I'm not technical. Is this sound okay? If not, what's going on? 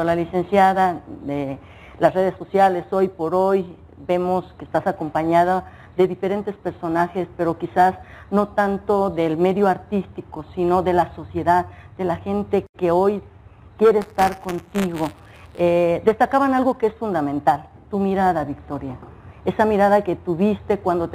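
No. From 14.01 to 15.60 s there's buffer tearing, a steady robotic buzz at 172 Hz, which fits a 256-sample buffer. A small slice of each buffer replays audio about 10 ms old. Unlike static, it appears only when sound is playing.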